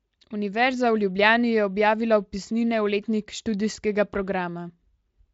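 No technical faults can be heard in the speech, which passes through the Speex codec at a setting high enough that its coding leaves at most a faint trace on the sound.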